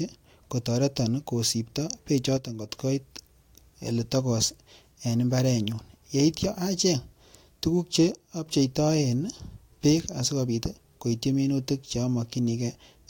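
At 2.37–2.69 s, after "kotoreton kosipto", and again at 8.12–8.46 s, the level abruptly drops by about 6 dB, likely one channel dropping out, showing as a sudden waveform step.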